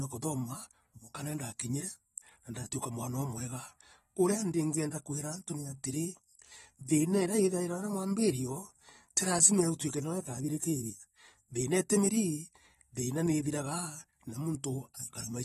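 Throughout, the speech sounds dull and smeared, with a fizzy, warbling edge and nothing above 12.5 kHz, likely AAC compression at a bitrate around 32 kbps.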